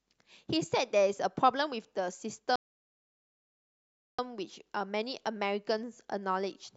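A rebuffering stall runs from 2.56 s to 4.19 s. The player exhausted the audio it had already downloaded and had to halt playback until more data arrived. The speech drops abruptly into silence for about 1.63 s, then picks up at exactly the point where it stopped, with nothing skipped or repeated. The gap simply inserts dead air into the timeline, so the clip runs longer than the original delivery.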